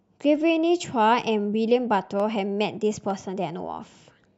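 Three sharp, isolated clicks cut through the speech at 1.20 s, 2.20 s and 3.10 s, each a brief spike across the spectrum. These are likely dropped samples: a fraction of a millisecond of the stream goes missing, so the waveform jumps abruptly to a later value.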